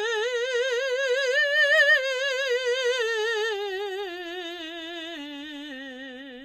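A short music clip with HE-AAC compression damage audible from start to finish. The treble is bright but synthetic, grainy and metallic. Its harmonics do not line up with those below. Nothing is present above about 14.9 kHz. The likely cause is HE-AAC at a low bitrate, around 24 kbps. At that rate, only the lower spectrum is truly coded. The top is rebuilt by copying lower bands upward under a coarse envelope.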